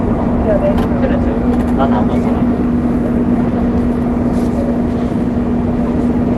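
No technical faults occur at any point in this audio, which carries only the band limit of a call codec, with nothing heard above roughly 12 kHz.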